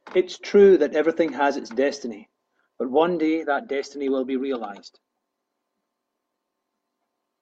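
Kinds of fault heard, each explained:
No kinds of fault are heard in this speech clip.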